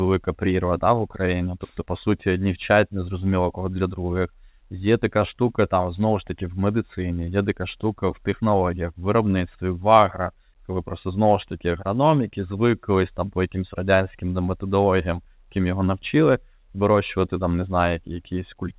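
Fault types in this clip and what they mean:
No fault types are present in this clip.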